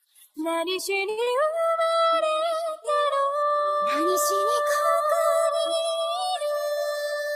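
At 1.09 s there's a short stall from a late packet. A packet simply wasn't there when it was due, the jitter buffer ran dry, and the receiver held the last bit of sound for about 79 ms until the packet showed up. It then carried on from exactly where it left off, so nothing is actually lost. What you hear is the sound hanging on too long through 1.20 s, with a faint buzzy or dipping quality.

Right after, from 1.23 to 1.29 s, comes a short concealed packet loss. This time about 60 ms of audio never made it to the decoder in time. The receiver papered over part of the gap by extending the last sound for about 31 ms and then blended back into the real signal, which also trimmed roughly 30 ms off the delay it had just built up. You get a quick smear or wobble there.

From 1.52 to 1.95 s there's a jitter buffer slow-down. With the buffer running low or its target delay just raised, the receiver rebuilt some reserve by repeating tiny slices of the waveform over and over, adding about 38 ms in total. 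Playback drops to about 92% speed without any pitch change, so the sound drags a little and can take on a slight warble.

Near the end, from 6.92 to 7.30 s, you get a jitter buffer speed-up. By this point the buffer was holding more audio than it wanted, so the receiver cut delay by snipping out short pitch-period-sized pieces again and again, removing around 50 ms. The sound runs at about 112% speed at the same pitch, which gives that last stretch a hurried, slightly rushed feel.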